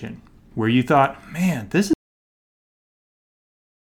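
At 1.93 s, right after "man this", the speech cuts off mid-flow in an audio dropout to silence that lasts to the end of the clip, about 2 s. The gap is silent with no room tone, which points to the input being lost while the recorder kept writing silence, likely from a disconnected device or an accidental mute. On the waveform the trace collapses to a flat line; the spectrogram goes completely blank.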